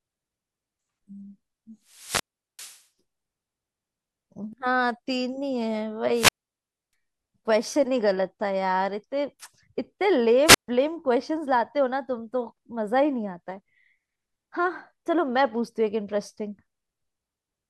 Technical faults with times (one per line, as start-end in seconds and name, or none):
1.88-2.84 wireless microphone squelch dropout
6.12-6.93 wireless microphone squelch dropout
10.45-10.68 wireless microphone squelch dropout